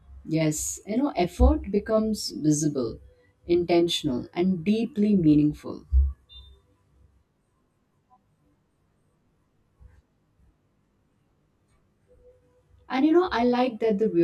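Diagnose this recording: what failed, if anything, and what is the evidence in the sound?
Channel delay with comb filtering, at the driver or buffer stage. It runs through the whole clip. The speech sounds rough and slightly doubled. One channel lags by around 20 ms. Summing to mono cancels shared content at evenly spaced notches, starting near 30 Hz.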